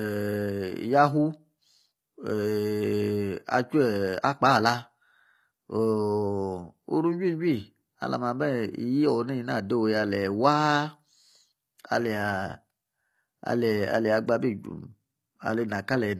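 The speech was likely squeezed through HE-AAC compression at a low bitrate, which fits roughly 24 kbps, so the treble is rebuilt by copying lower bands upward. Throughout, s sounds come out gritty and lispy, with a bright but metallic edge.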